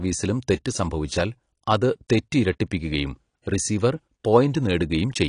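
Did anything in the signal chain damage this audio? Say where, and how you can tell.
Yes: AAC compression throughout, at the codec stage. Nothing sounds above 10.2 kHz, and the dull, smeared speech likely comes from coarse quantisation, consistent with roughly 32 kbps.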